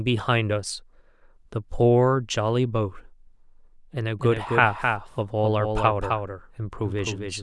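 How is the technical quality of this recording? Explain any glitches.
The recording has one clear glitch in its final stretch. From 4.19 s to the end, the speech carries a doubled audio track: a second full-band copy trails about a third of a second behind, roughly 5 dB quieter. It likely comes from a slower capture path or misaligned edit. Unlike room echo, it starts abruptly, never decays, and carries no reverberant colour.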